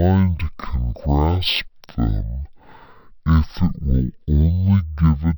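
A speech recording played back as stereo read as mono, with the fault running through the whole clip. The interleaved left and right samples are taken in turn as one channel, so every frame counts twice: playback runs at half speed and pitch drops a full octave, 12 semitones, giving slow, deep, sluggish speech. On a spectrogram the harmonics sit at half their proper spacing, with a fainter mirrored copy of the speech energy reflected into the upper half of the frequency range.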